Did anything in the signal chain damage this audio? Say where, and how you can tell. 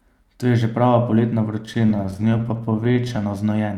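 Yes, network jitter buffer: repeated stalls (stutter) from 1.63 to 3.24 s. Dozens of brief holds, each up to 18 ms, repeat the last sound, showing as stretched, duplicated waveform slices.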